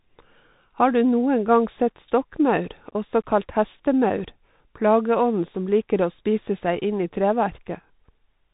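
The speech passes through a Bluetooth CVSD headset codec throughout: one-bit slope coding, consistent with a 64 kbps link, whose adaptive step can't track fast loud changes. Nothing above 3.8 kHz survives, s sounds turn scratchy, and a granular hiss sits underneath.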